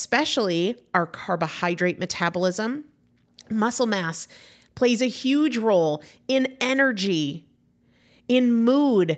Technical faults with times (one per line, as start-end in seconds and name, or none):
none